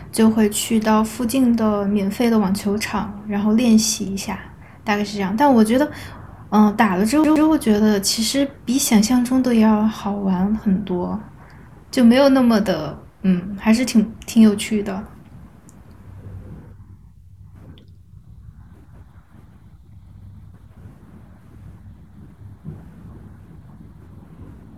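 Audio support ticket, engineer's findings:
Speech clip. CD stuck on one turn, 7.24–7.48 s: same ~119 ms slice plays twice, brief mute at each jump. Scratch kicking the laser back one track. Classic disc skip.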